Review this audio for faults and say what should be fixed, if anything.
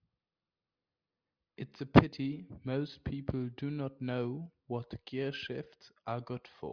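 No faults can be heard in the recording. Nothing here needs to be fixed.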